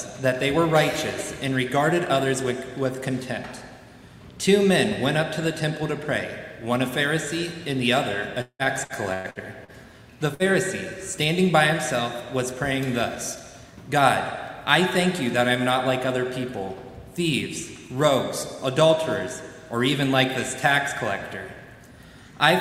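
At 8.41 to 8.62 s comes a gap that behaves like a long network dropout, likely caused by a run of packets that never arrived. About 180 ms of the sound is lost. The receiver fills roughly 178 ms of it by extending the last sound as a buzz or hiss that fades. The final 60 ms is plain silence before the audio resumes further on. On a spectrogram, the harmonics smear flat and dim, and then the column goes empty. On the waveform, the amplitude tapers to a flat line.

From 8.84 to 8.93 s there is a short stall from a late packet. A packet missed its slot, the jitter buffer ran dry, and the receiver held the last sound for 57 ms until the packet came in. Playback then continued from the same place, so nothing is missing. The delay simply grew by 57 ms. It sounds like a brief drawn-out hold with a faint buzz or dip. A spectrogram shows a short stretch of frozen, repeated spectral frames.

A second long network dropout spans 9.14 to 9.43 s. 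Here 120 ms is missing and 216 ms is concealed, with no silent stretch. The held sound fades but never reaches nothing. A further 10 ms is trimmed as the delay changes by around 40 ms. Visually, it is a smeared, decaying band with no fully blank gap.

At 9.64 to 9.71 s another short stall holds the sound for 40 ms with nothing lost. It shows the same brief frozen-frame pattern, and the delay rises by 40 ms.

At 10.34 to 10.42 s a burst of packet loss removes 60 ms. The receiver covers 52 ms by continuing the last sound while turning it down, so a voiced sound becomes a held buzz and other sounds a fading hiss. It is followed by a jump forward where the in-between part is gone. The spectrogram shows a short smeared patch ending in a discontinuity, and the waveform dips in envelope.

From 12.77 to 13.41 s a jitter buffer speed-up plays the audio at 105% speed. It does this by cutting out pitch-period-sized slivers, around 40 ms in total, to drain excess buffered delay. 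The pitch stays the same, but the passage sounds slightly hurried. On the waveform, periods are spliced out at repeated points. On the spectrogram, the events are compressed in time without any shift in frequency.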